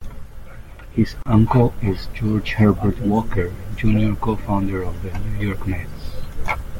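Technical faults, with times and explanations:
1.23–1.26 s, gap at a join of encoded pieces: the speech was encoded in separate pieces about 6 s long and spliced together without trimming. Each encoder's start-up delay and the padding of the previous piece's final frame were left in place, so the join holds a gap of roughly 33 ms. The speech drops out with smeared edges, then resumes exactly where it stopped, just before "uncle is".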